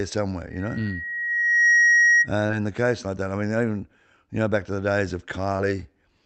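A speech recording carried over a call link, with high frequencies rolled off above about 8 kHz. From 0.50 s to 2.29 s there is loudspeaker feedback squeal. A single 1.9 kHz tone swells over about a second to roughly 10 dB above the speech. The microphone is hearing its own loudspeaker, and the loop gain has passed one at that frequency. It stops just before "in the case like". There are also three short concealed packet losses, at 1.25–1.29 s, 2.47–2.51 s just before "in the case like", and 5.57–5.61 s after "back to the days". Each is a brief smear or wobble. Each gap fits one lost 20 ms frame, bridged by extending the previous sound.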